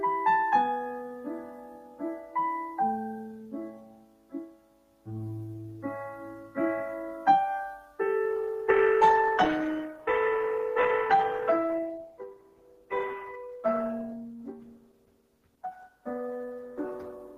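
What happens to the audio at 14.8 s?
At 14.8 s the audio is inside a stretch where an adaptive stream at a lower bitrate took over. From 8.25 s to the end of the clip, the player switched to a cheaper encoding of the same sound, most likely because the connection slowed, and the character fits a step down from Opus at 64 kbit/s to 16 kbit/s. Codec artefacts become more prominent. Unlike a dropout or packet loss, the change in quality at 8.25 s is sudden, with no gap or break in the sound.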